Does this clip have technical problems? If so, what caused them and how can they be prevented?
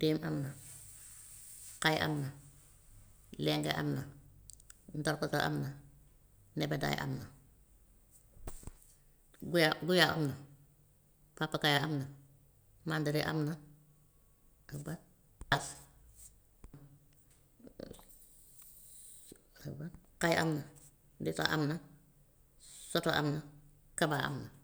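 No, there are no technical problems to report here.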